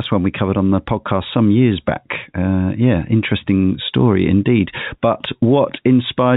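Nothing in this speech clip stood out as a technical fault on listening, with the narrow telephone-band character of its G.711 coding being the expected sound of that format.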